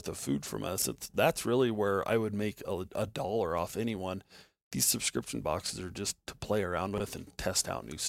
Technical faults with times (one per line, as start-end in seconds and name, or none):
0.78-0.84 chunks out of order
5.66-5.70 chunks out of order
6.94-7.00 chunks out of order